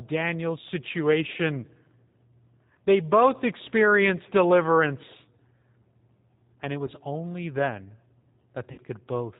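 Throughout the clip the speech carries plainly audible G.729 codec damage, consistent with the G.729A variant at 8 kbit/s. The codec rebuilds each 10 ms frame from a vocal tract filter, a pitch predictor and a few pulses, so the speech comes out slightly rough and synthetic. On a spectrogram everything stops at a hard ceiling near 4 kHz, and harmonics look smeared rather than crisp.

At 6.87 s, lasting to about 6.91 s, VoIP packet loss concealed by the speech codec produces a brief glitch. The missing audio fits a single 10 ms frame. The decoder fills the gap by repeating its last pitch and filter, then needs a few tens of milliseconds to recover. You hear a short stretched smear. On the waveform it shows as a slight dip in the envelope with overly regular cycles.

From 8.72 to 8.80 s a longer loss occurs, fitting six consecutive 10 ms frames. Concealment stretches the last sound out and fades it as the gain drops frame by frame. 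The speech then stays weak for a moment after the packets return. On a spectrogram this appears as a flat, repeated pattern that dims over about 80 ms.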